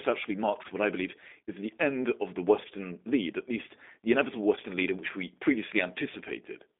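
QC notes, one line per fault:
Throughout, G.729 codec: band-limited, slightly rough and synthetic sound with plainly audible codec damage and nothing above 3.8 kHz, which fits 8 kbit/s G.729A rebuilding each frame from a filter and a few pulses.
4.37 to 6.37 s, pre-emphasis left on: the sound turns thin, bright and sibilant because a 50 µs treble boost, about 11 dB at 10 kHz relative to 1 kHz, was never cut back.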